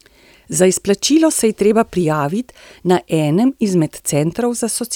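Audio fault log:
No faults heard.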